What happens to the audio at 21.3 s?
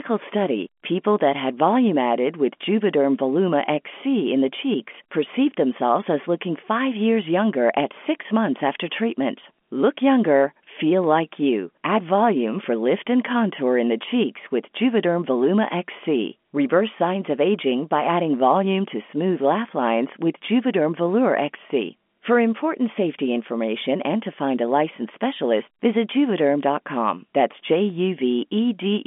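Nothing goes wrong at 21.3 s: the speech carries on intact through that moment, with only the narrow telephone band of G.711 coding that runs through the whole call.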